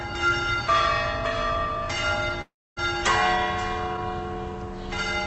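Everyday sound that cuts out from 2.41 to 2.79 s, likely a long network dropout: the last sound stretches into a fading buzz, then about 0.27 s of near-silence before it resumes with material missing. A short packet-loss glitch would repair itself in milliseconds. Through the call path, the Opus coding limits the top end to around 8 kHz.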